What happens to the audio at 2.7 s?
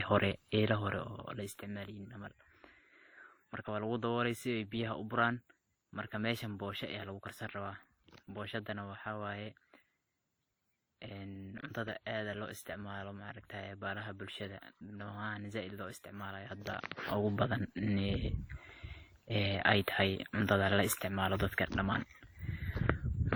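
At 2.7 s the speech has a layered coding texture, with the artefacts of two codecs heard together and nothing above about 20.2 kHz, and it stays that way for the whole clip. The cause is likely transcoding between lossy codecs. The artefacts fit a WMA encode at around 48 kbit/s re-encoded with Opus at a similar rate, where the second codec spends bits on the first one's damage and adds its own.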